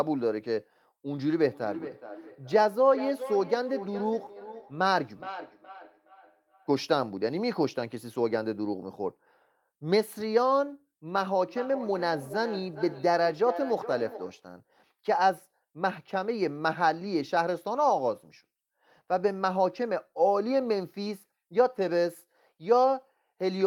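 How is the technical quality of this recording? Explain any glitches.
The recording has two bursts of feedback echo between two devices, from 1.21 to 6.94 s and from 11.15 to 14.49 s. A second device in the room replays the speech into the microphone, and local echo cancellation misses it, so phrases return roughly every 0.4 s, peaking about 13 dB below the speech.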